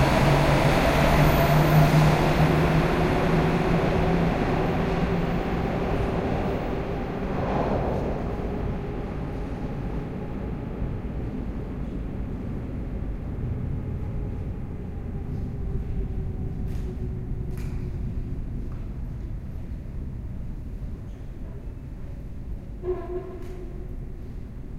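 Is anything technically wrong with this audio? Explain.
No, there is nothing technically wrong with this recording of sounds. No fault can be heard anywhere in it.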